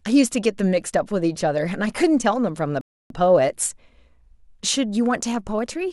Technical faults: rebuffering stall

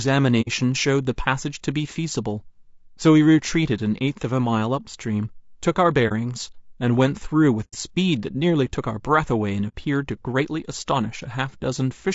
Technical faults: low-delay AAC compression; AAC frame loss with muting

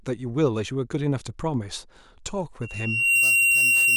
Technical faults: loudspeaker feedback squeal

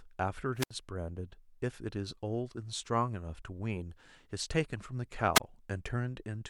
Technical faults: wireless microphone squelch dropout

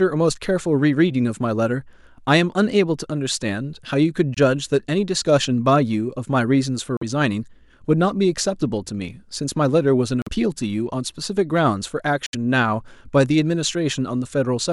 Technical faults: Bluetooth dropout

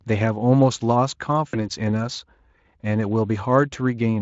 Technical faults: VoIP packet loss concealed by the speech codec

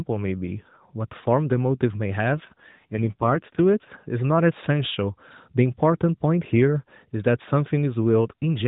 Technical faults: AMR rate drop

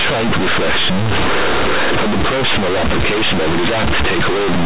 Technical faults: companded audio read as linear

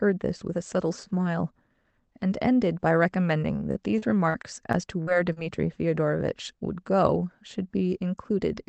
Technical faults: repeated packet loss (robotic sound)

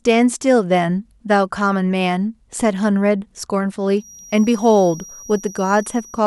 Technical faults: feedback whistle

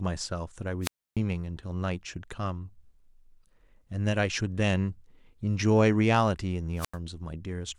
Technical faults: wireless microphone squelch dropout

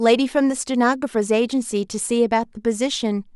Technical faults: none

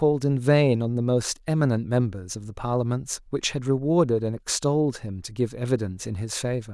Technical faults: none

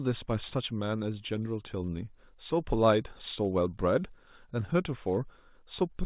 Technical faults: short stall from a late packet

